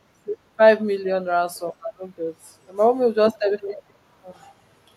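Around 3.57 to 3.76 s there's an echo leak: a faint, delayed copy of the speech trailing it by 164 ms, sitting well below the main level. It's likely a far-end speakerphone whose echo canceller let some of its own playback slip back through.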